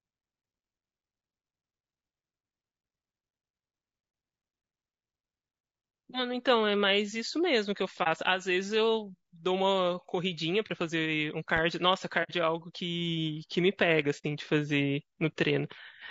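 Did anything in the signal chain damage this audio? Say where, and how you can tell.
Yes. The speech sounds rough and grainy throughout, with noise filling the gaps between pitch harmonics and a thin, synthetic top band. This is likely low-delay AAC compression (AAC-ELD) at the codec stage. Its short frames resolve harmonics poorly, and the damage fits a bitrate around 32 kbps.

Brief dips appear at 8.03–8.07 s and 10.67–10.71 s, and soft-edged holes at 12.23–12.32 s and 14.18–14.24 s. This is AAC frame loss with muting in the network stage. The decoder zeroed the missing spectrum, so the overlapping windows fade out and back in. The first two gaps fit one lost 30 ms frame and the last two fit two.

A sharp loud pop sits on top of the speech at 11.57–11.60 s, a few decibels above it, while the speech carries on underneath. It is a single pulse, likely an electrical step from a plug, switch or static in the analogue wiring, shaped by the circuits after it.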